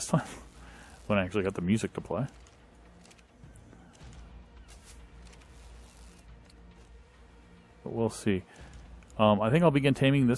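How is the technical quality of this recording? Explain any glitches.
No glitches or technical faults can be heard anywhere here.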